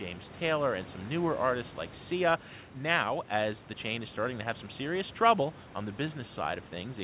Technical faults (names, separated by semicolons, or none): none